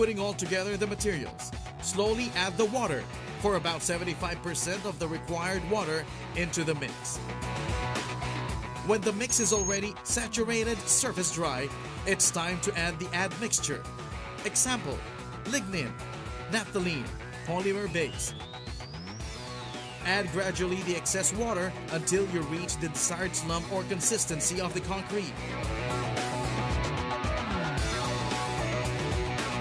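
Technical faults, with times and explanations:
No technical faults can be heard anywhere in the clip. There is nothing to list with a time or an explanation.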